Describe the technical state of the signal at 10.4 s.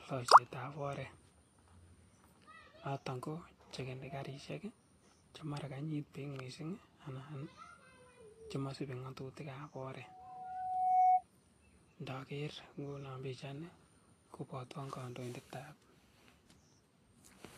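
At 10.4 s a loudspeaker feedback squeal is under way. It runs from 9.99 to 11.22 s. A single tone at 742 Hz swells over roughly a second to about 15 dB above the speech. The microphone is picking up its own loudspeaker, and the loop gain exceeds one at that frequency.

The speech is also hissy and grainy, with smeared consonant attacks. Nothing is present above 14.2 kHz. This is likely Vorbis compression at a low setting, around 33 kbps. The treble is quantised so coarsely that fine detail turns to noise.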